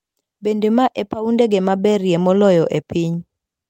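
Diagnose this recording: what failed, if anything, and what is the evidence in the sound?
Nothing failed; no faults heard.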